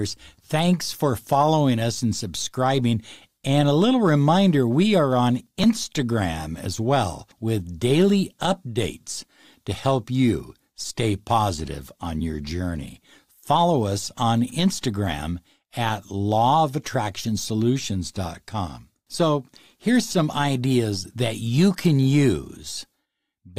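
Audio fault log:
5.39–5.84 s, processor overload crackle: a gritty burst of crackle tears across the speech for about half a second. The processor fell behind and missed deadlines on very short buffers, about 15 times over that stretch. Each missed buffer was skipped, leaving hard-edged gaps.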